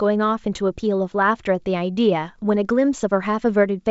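Speech over G.722 wideband coding; no faults to report.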